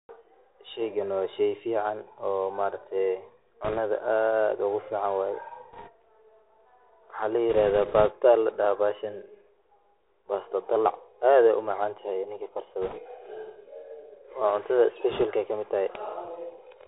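The whole recording passes through the Bluetooth CVSD headset codec, and the damage is plainly audible. The sound is band-limited with nothing above 4 kHz, consistent with a 64 kbps CVSD stream. Its one-bit delta modulation lags behind fast high-frequency swings, so sibilants turn scratchy and a grainy hiss sits beneath the speech.

Bit errors on a Bluetooth voice link appear as short bursts at 3.64–3.79 s, 5.73–5.89 s, 7.50–8.11 s, 12.82–13.00 s and 15.11–15.24 s. Each flipped bit nudges the decoder by one step, scaled to the speech level, and then fades, so each burst is a rushing crackle, not clicks, at an error rate of a percent or two.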